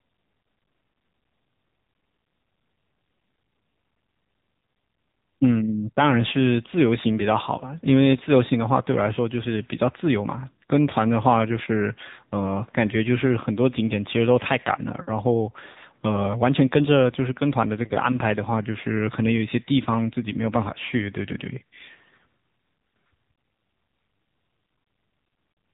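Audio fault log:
Throughout: AMR narrowband mobile codec. The speech is cut off sharply above 3.8 kHz and has a plainly audible buzzy, synthetic edge. Each 20 ms frame is rebuilt from a vocal-tract model driven by sparse pulses, which fits one of AMR-NB's lower modes, near 8 kbit/s.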